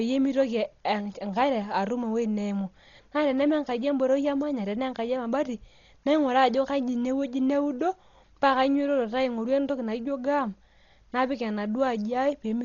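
Dolby Digital compression, likely, runs through the whole clip: the speech has nothing above 6.9 kHz, so it sounds dull and muffled, which fits a very low bitrate of around 32 kbps. At such a rate the encoder trims the upper band and leaves many frequency lines with no mantissa bits, and the decoder fills those gaps with dither noise. The damage is heavy, with a rough, fluttering grain clinging to voiced tones.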